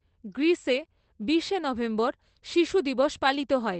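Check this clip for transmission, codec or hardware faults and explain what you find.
Nothing is wrong with the signal: the speech comes over a WebRTC call path with its top end limited to 8 kHz, which fits the Opus codec running at 24 kbps.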